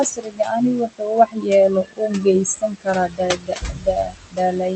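Across the whole of this speech clip the background sinks in the pauses and swells back under the voice. These are noise suppressor artifacts: the suppressor decides frame by frame which frequency bands hold steady noise and turns them down, so the room noise, sitting about 10 dB below the speech, is pumped rather than held steady. In places the speech itself drops away, sounding swallowed or faint, from 0.04 to 1.51 s, where about a second of it is pulled down by as much as about 21 dB, and again from 1.69 s to the end at 4.75 s, with dips of up to about 22 dB. This is speech cut by the noise suppressor, which mistakes softer parts of the voice for background noise and attenuates them along with it.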